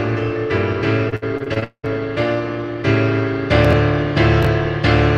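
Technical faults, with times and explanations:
1.09–1.88 s, repeated packet loss (robotic sound): eight gaps, the longest 196 ms, filled by stretching earlier sound over nearly half the span. The result is choppy, with sound actually missing.
3.65 s and 4.43 s, chunks out of order: a 20 ms chunk plays three chunks late, then one plays a chunk late. This gives a brief jumble, but nothing is lost.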